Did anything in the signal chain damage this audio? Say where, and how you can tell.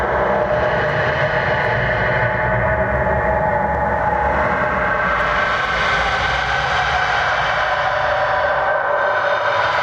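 Yes. Gain pumping runs through the whole clip, with a level swing of around 15 dB. The likely cause is input gain set far too high, so a fast limiter or compressor clamps down on every peak and squashes loud and soft parts together.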